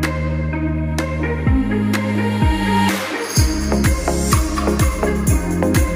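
No technical faults can be heard anywhere in the audio.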